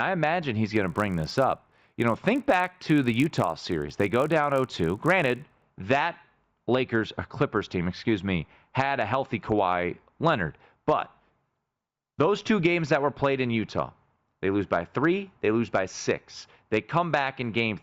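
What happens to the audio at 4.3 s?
Resampler restarted on every block, from 0.74 to 5.62 s, so 4.3 s falls inside it. Each 20 ms block is converted separately, leaving a small error at every edge. The result is a 50 Hz buzz riding on the speech, present only while sound is playing.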